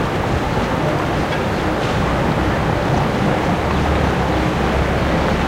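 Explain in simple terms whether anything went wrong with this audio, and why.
Nothing went wrong here; no problems can be heard.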